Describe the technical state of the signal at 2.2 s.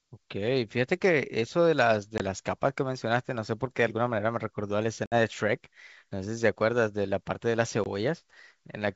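Packet loss on an ADPCM call drops 20 ms (about one packet) at 2.18–2.21 s, desynchronising the decoder's predictor and step size. A hard silent gap follows, then the speech returns slightly distorted.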